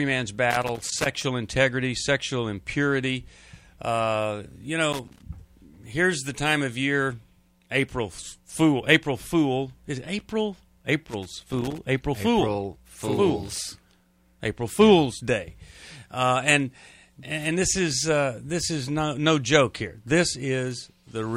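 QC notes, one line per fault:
0.51–1.06 s, 4.93–5.22 s and 11.06–11.84 s: loose connector crackle, three irregular bursts of scratchy crackle. A worn or dirty contact keeps making and breaking as it shifts, chopping the signal into fragments, with pops wherever the line carries DC.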